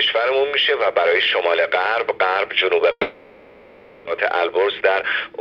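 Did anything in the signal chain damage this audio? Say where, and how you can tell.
Yes. At the network stage, a long network dropout likely left the receiver with no incoming audio from 2.91 s to 4.09 s. Its concealment stretched the last sound into a fading buzz or hiss across most of that span, leaving only a brief moment of near silence. When audio resumes, about 0.86 s of the original is missing, and playback restarts at a later point, roughly a third of a second behind where it had been.

Next, in the jitter buffer, a jitter buffer speed-up runs from 4.35 s to 5.34 s. After the dropout, the buffer held more audio than its target. To shrink the excess, the receiver repeatedly cut out pitch-period-sized slices, removing roughly 150 ms in total. Across that second the sound plays about 15% fast at unchanged pitch, so it comes across as hurried rather than higher.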